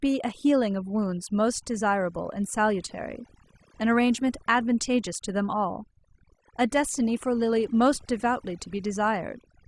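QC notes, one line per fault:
Throughout: overdone noise removal. The background between phrases drops and breaks up, dotted with twinkling, chirping specks, and the softer edges and breathy detail of the speech are hollowed out. A noise reduction stage has been set far too aggressively: any frequency band sitting close to its noise estimate is pulled hard down or gated off, so isolated bands flicker in and out as tones, and the quieter parts of the speech are removed along with the noise.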